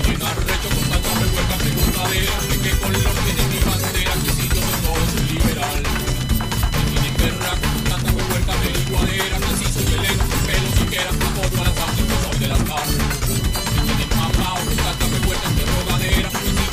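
Computer activity noise runs throughout the audio: a chirping, buzzing whine pulsing at roughly 1 kHz, some 20 dB below the sound. Unlike steady mains hum, it shifts with processor or graphics load disturbing the shared ground rather than with the sound itself.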